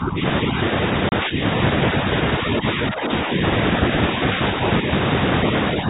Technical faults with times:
0.00-0.23 speech suppressed in double talk
1.09-1.13 packet loss on an ADPCM call
1.26-1.39 speech suppressed in double talk
2.44-3.30 speech suppressed in double talk

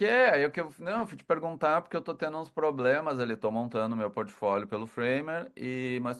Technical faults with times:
none

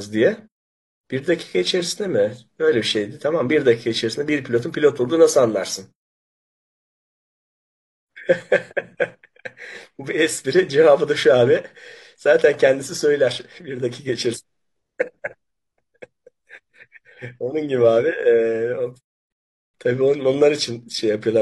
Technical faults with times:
19.32-19.74 rebuffering stall

